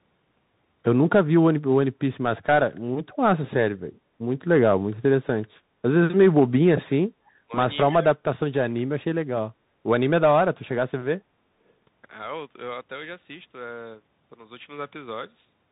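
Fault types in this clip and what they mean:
Bluetooth CVSD headset codec: The whole recording carries the damage of a narrowband Bluetooth headset link at 64 kbps, where each sample is coded as a single up-or-down bit with an adaptive step. Nothing above 4 kHz survives, so the speech sounds muffled and boxy. Fast, loud high-frequency movement outruns the step size, leaving s sounds scratchy and a grainy hiss sitting under the speech from start to finish.
Echo leak: At 3.09 to 3.16 s a faint delayed copy of the speech appears, trailing the original by about 298 ms and sitting roughly 30 dB below it. It is a brief scrap rather than a sustained echo. The likely cause is a far-end loudspeaker whose echo canceller let part of what its microphone picked up get through and return down the line.
Speech suppressed in double talk: The talker's level collapses in three places. From 6.16 to 6.9 s it drops by around 30 dB. 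A short dip of roughly 15 dB follows at 7.46 to 7.52 s. The deepest cut, about 40 dB, comes at 7.92 to 8.74 s, where the speech is almost gone. These are likely an echo canceller turning everything down while both sides spoke at once.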